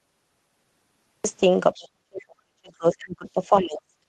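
Cut-off start, from 0 to 1.24 s: the recording began late, so the clip opens on about 1.24 s of digital silence before the speech appears abruptly at 1.24 s. There is no natural attack or gradual onset. The signal jumps straight into a sound already under way, as though the capture switched on partway through an utterance and kept only what came after that point.

Other side's voice leaking through, from 1.74 to 1.83 s: a brief scrap of a second voice slips in, sitting about 25 dB below the main speech. It is short and faint, a fragment rather than a clear phrase. This is likely residual echo: the far end played on a loudspeaker, and the echo canceller did not fully remove it from the microphone pickup before the signal went out.

Speech suppressed in double talk, from 1.78 to 4.06 s: overlapping the end of that leak, the main speech dips over roughly 2 s of the remaining audio. At its deepest it falls by around 40 dB, enough to make stretches nearly vanish. 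The pattern is likely the echo canceller failing to separate the near talker from the overlapping far-end signal and turning both down. The result is heard through the band-limited call path, which fits an Opus stream capped near 12 kHz.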